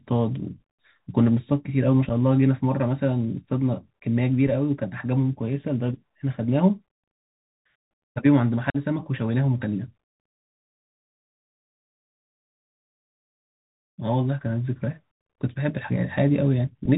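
The speech is muffled and narrowband, with nothing above about 4 kHz, a granular hiss underneath, scratchy s sounds and gritty distortion on loud high-pitched sounds. This is the Bluetooth CVSD headset codec, whose one-bit up/down steps (consistent with a 64 kbps link) can't keep pace with fast, bright changes. Abrupt holes appear at 2.09 s, from 8.70 to 8.77 s and from 15.27 to 15.30 s, about 7.5 ms, 45 ms and 30 ms of missing sound, each followed by briefly quieter audio. These are unconcealed Bluetooth headset packet loss, roughly one, seven and four lost packets replaced by silence or an idle pattern rather than patched over.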